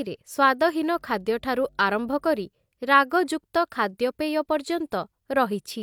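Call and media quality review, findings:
Mains hum, 0.95 to 2.45 s: steady 50 Hz tone with low harmonics, faint, well below the speech. Probable ground loop or nearby transformer coupling the power line into the signal. Fixed pitch and constant level distinguish it from broadband rumble or handling noise.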